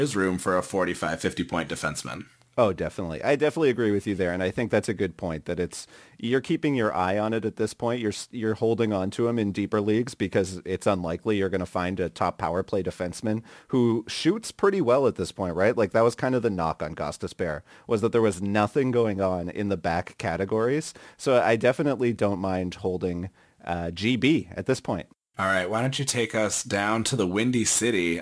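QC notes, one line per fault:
Throughout: aliasing. The sound points to a downsample from 48 kHz to around 22 kHz with no adequate anti-alias filter first, so energy above the new 11 kHz limit folds back below it instead of being removed. Sibilants pick up a gritty, metallic edge from tones at frequencies unrelated to the speech, sitting roughly 25 dB under the signal. The spectrum runs hard up to 11 kHz with no roll-off.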